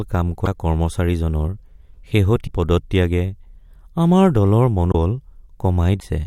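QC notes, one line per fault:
0.45–0.47, 2.46–2.49, 4.91–4.95 and 5.99–6.03 s, broken MP3 bit reservoir: the speech jumps ahead and each gap holds a 24–40 ms chirp, noise burst or short hole, likely from missing frames leaving following 24 ms frames decoding another frame's bytes.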